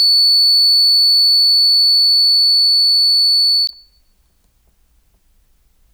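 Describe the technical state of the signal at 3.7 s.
At 3.7 s the music is hit by damaged data in the compressed stream, from 3.65 to 3.70 s. Corrupted bytes there make the decoder misread the frames and lose sync. It hunts for the next valid frame header, producing a brief chirp or blip.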